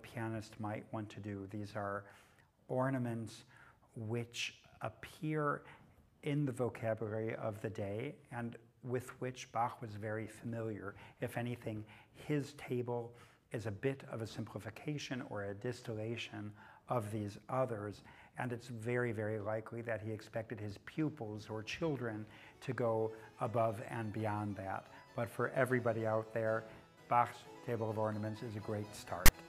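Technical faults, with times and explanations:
29.26 to 29.29 s, file tags played as audio: for about 30 ms near the end, a block of text tags followed by zero padding is decoded as if it were samples. The text bytes sit in a narrow numeric range, so they give a loud, harsh rasp pushed off-centre, and the padding then drops to dead silence. On the waveform this shows as a short slab riding well to one side of zero with vertical edges, then a flat line. On the spectrogram it is a full-height broadband stripe.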